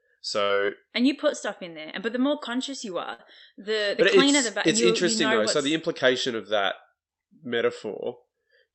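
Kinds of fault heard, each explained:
Burst of packet loss: at 0.43 s and 3.13 s the speech freezes into a held, fading sound for 60 ms and 53 ms, then resumes 60 ms further on, because consecutive packets were lost and the receiver stretched the last audio.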